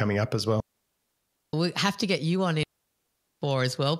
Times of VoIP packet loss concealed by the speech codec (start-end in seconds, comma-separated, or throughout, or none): none